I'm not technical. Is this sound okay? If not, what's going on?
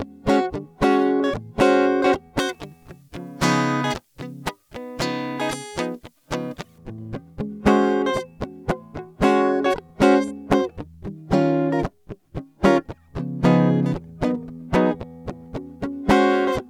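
No. From 2.39 to 6.78 seconds, the music turns thin, harsh and hissy. That's pre-emphasis left on: treble boosted for transmission was never turned back down.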